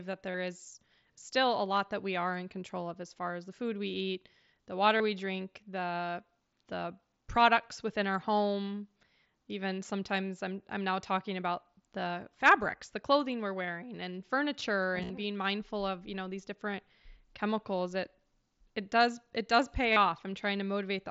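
Speech with concealed Bluetooth headset packet loss: brief buzzy held-tone patches at 0.31 s before "is still a lot" (30 ms), at 4.98 s between "food we eat the" and "we drink the the" (about 22 ms), scattered across 14.98 to 15.10 s, and at 19.92 s after "does it does pay" (about 38 ms). Each gap was refilled with a repeated slice of the preceding waveform, so on a waveform it shows as a short periodic stretch at steady level, and on a spectrogram as flat horizontal harmonic bands, all within the mSBC codec's 8 kHz band.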